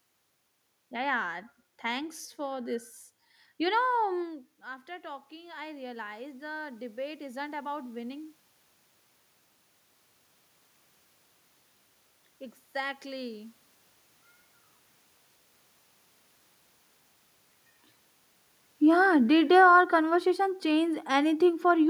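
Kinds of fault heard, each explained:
Automatic gain rising: After the talker moves back from the microphone at around 4 s, the input drops by about 15 dB, and from 4.21 to 8.35 s the automatic gain control slowly raises its gain by about 9 dB to compensate. The voice and the room noise swell together over those four seconds. On a waveform the envelope climbs steadily. On a spectrogram the noise floor between phrases brightens along with the speech.
Automatic gain falling: After the talker moves at around 17 s, from 18.81 to 21.85 s the gain control pulls its gain down by about 5 dB. The speech sinks, and the background room noise sinks with it. The waveform shows a gradually shrinking envelope, and the spectrogram shows the speech and the noise floor dimming together rather than the speech alone.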